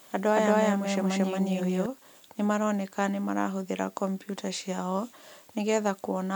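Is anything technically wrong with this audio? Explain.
Yes. A doubled audio track runs from the very start to 1.86 s: a second, equally loud copy of the speech trails the original by around 200 ms, with no decay or room colour, and drops out abruptly. This is likely from a second capture path or misaligned edit.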